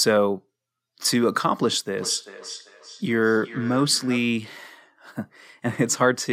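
From 1.98 to 4.42 s the speech is followed by feedback echo between two devices: a second device on the same call replays this microphone's signal, the microphone captures it again, and neither echo canceller removes the other device's playback. Each phrase returns after a steady gap of roughly 0.4 s, peaking about 16 dB below the direct speech. That fixed, regular delay distinguishes it from room reverberation, which smears continuously rather than repeating at a set interval.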